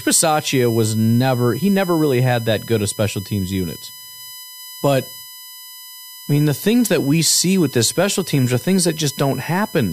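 USB whine sits under the speech from start to finish: a steady tone at 1 kHz plus harmonics, strongest at 22 kHz, about 15 dB below the speech. Current pulses from the bus's 1 ms frames are leaking in through the power or ground path.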